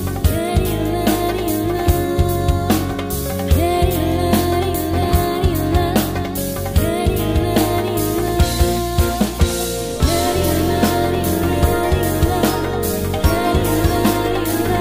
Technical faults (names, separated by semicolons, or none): none